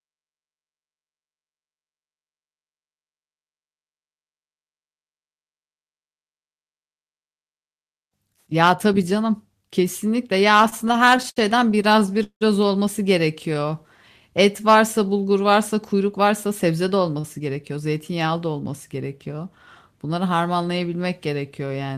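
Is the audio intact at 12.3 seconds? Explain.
No. At 12.3 s the speech is inside a run of repeated stalls (stutter) lasting from 10.57 to 12.43 s. Packets arrived late or more slowly than playback consumed them, so the jitter buffer kept running dry, 22 times in all. Each time, the receiver extended the last sound until data resumed, with the longest hold at 174 ms, totalling 453 ms, about a quarter of the span. Nothing is lost, but the speech drags and stutters.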